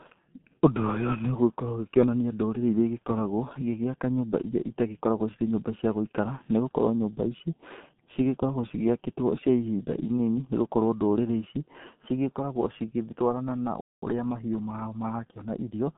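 It's a speech clip, and the whole thing has been through the G.723.1 codec, the old internet-telephony coder running at about 6.3 kbit/s. That rate is very low, and you can hear it. The line band sits roughly between 150 Hz and 3.6 kHz, with nothing at all above 4 kHz, so the voice comes across boxed-in and muffled. The codec damage is heavy: its slow-moving voice model smears the consonants and leaves a hoarse, rough edge on everything. Then there's a playback stall right after "cigĩtwarana na". The audio just drops out from 13.81 to 14.02 s, a gap of about 0.21 s, before picking up again. That's most likely the player running dry on data or having its thread held up, so output went silent until it recovered. Straight after that comes a time-compressed catch-up from 14.02 to 15.84 s. The speech plays about 1.1 times faster while the pitch stays put, because the player is trimming its backlog by snipping out tiny pieces and cross-fading across the joins. 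It sounds a little hurried through that stretch.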